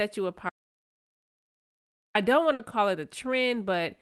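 A speech recording carried over a call link, where the top end stops near 12 kHz, consistent with Opus at around 32 kbps. From 0.50 s to 2.15 s the audio drops out to silence: about 1.65 s of silence with no room tone, and the speech simply breaks off and then resumes, so whatever was said in that stretch is lost. The likely cause is the input being disconnected or muted while the recorder kept writing. A burst of packet loss follows at 2.53 to 2.61 s, just before "call it": the receiver fills about 60 ms by extending the last sound and fading it out, heard as a brief held buzz or hiss, and the speech then picks up with about 60 ms missing.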